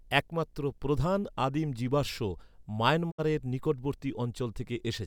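A faint buzz sits under the speech for the whole clip, well below the voice level, humming at 60 Hz with a gritty hash above it. This is video or display buzz: a screen or video cable coupling its 60 Hz field rate into the audio.

At 3.10 s the sound fades out over about 20 ms and stays silent until 3.20 s, with about 64 ms of audio simply gone. This is a digital broadcast dropout, where the receiver muted after frames failed, which points to a couple of lost frames.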